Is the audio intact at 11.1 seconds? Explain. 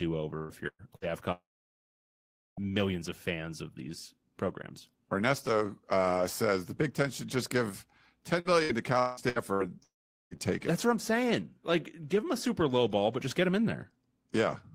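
Yes, the audio is intact at 11.1 seconds, without any dropout, click, distortion or other audible fault at that moment.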